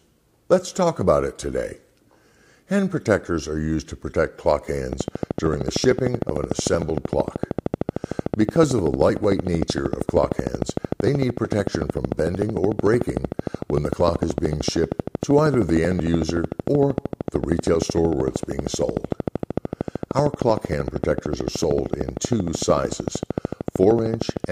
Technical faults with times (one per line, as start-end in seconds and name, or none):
4.93-24.45 train of clicks